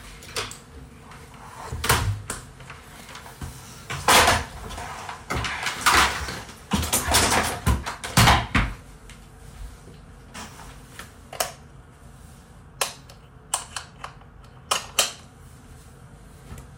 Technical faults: damaged data in a compressed stream

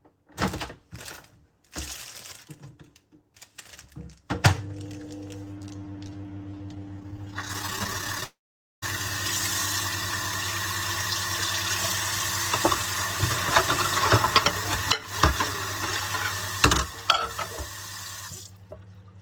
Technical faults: repeated stalls (stutter); call audio freeze; jitter buffer speed-up

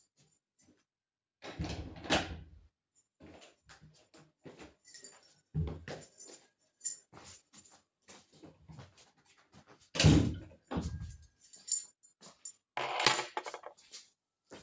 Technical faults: none

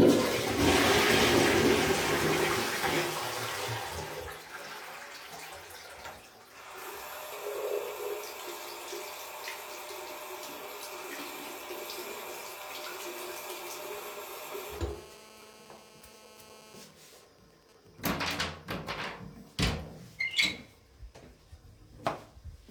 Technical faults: GSM phone buzz; GSM signalling bursts

